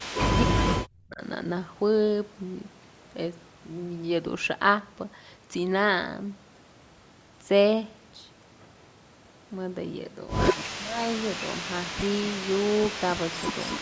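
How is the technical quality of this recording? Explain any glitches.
The speech dips out twice, a fault known as speech suppressed in double talk. It happens at 0.44 to 1.22 s, with a very deep drop, and again at 10.67 to 11.0 s, more shallowly. The likely cause is an echo canceller mistaking the talker for loudspeaker echo while both sides spoke, and turning it down. The call processing's band, with nothing above 8 kHz, is normal.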